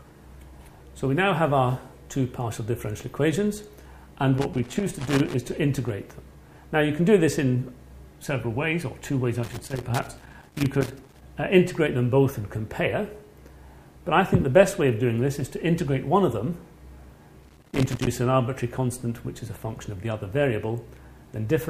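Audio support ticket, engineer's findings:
Loose connector crackle, three bursts: 4.38–5.34 s, 9.44–11.23 s, 17.43–18.07 s. Irregular scratching and crackle, the longest burst near 1.8 s. Probable component: worn or dirty cable connector or jack. Mechanism: the contact opens and closes rapidly as the plug shifts, chopping the signal. Any DC on the line turns each break into a pop. Action: reseat, clean or replace the connector, then wiggle-test.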